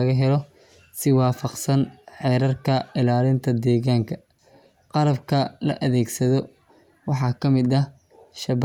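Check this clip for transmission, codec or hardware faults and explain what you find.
No transmission, codec or hardware faults turn up in this clip.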